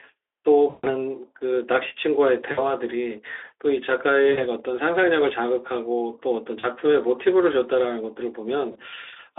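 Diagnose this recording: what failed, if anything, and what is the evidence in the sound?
The network stage failed, and the speech codec covered the gaps with VoIP packet loss concealment. At 0.69 to 0.86 s (the longest, about 140 ms), 2.51 to 2.73 s, 4.31 to 4.45 s, 6.59 to 6.64 s and 8.71 to 8.77 s, the speech smears into a fading buzzy tone or coloured noise instead of dropping to silence. The decoder keeps repeating its last pitch and filter at falling gain, and the voice stays thin briefly afterward. A plain dropout would click into silence. The Speex band of 300 Hz to 3.5 kHz frames all of this.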